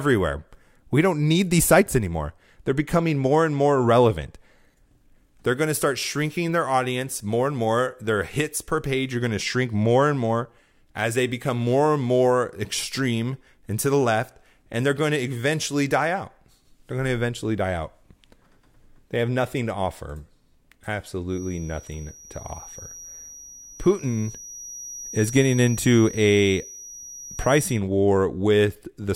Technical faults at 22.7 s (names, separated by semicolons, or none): feedback whistle